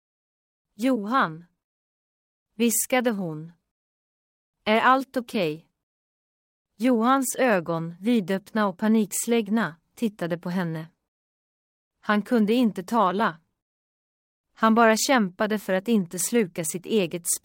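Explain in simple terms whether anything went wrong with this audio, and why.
Nothing went wrong with this audio, and there is no fault in the speech to point to.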